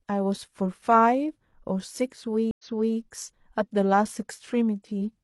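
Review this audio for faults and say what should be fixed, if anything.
A stream reconnect at 2.51 to 2.96 s: an 80 ms flat gap in the waveform, then speech restarts 0.37 s earlier, so the spectrogram shows a repeated stretch. Buffering on the client and resuming from the last decoded position would prevent it.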